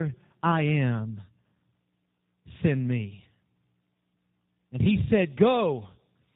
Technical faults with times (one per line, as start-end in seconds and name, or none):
0.00-6.36 tandem speech coding